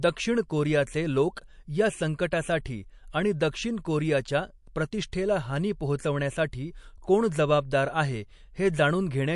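The speech in this clip carries audible MP3 compression damage from start to finish. Nothing sounds above 11.3 kHz, so the top end is cut off flat. The sibilants lose their air. The sound has a watery, swirling texture where weak frequency lines drop in and out from frame to frame. Consonant onsets smear. The likely cause is lossy MP3 encoding at a low bitrate, which fits roughly 48 kbps.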